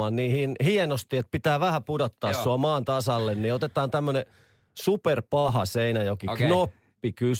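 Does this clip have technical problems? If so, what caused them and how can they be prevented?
Yes. Short concealed packet loss at 5.39 to 5.47 s: about 40 ms of speech missed the decoder, which extrapolated the preceding sound and blended back, leaving a brief smear rather than the silent gap of a plain dropout. Forward error correction and a deeper jitter buffer prevent it.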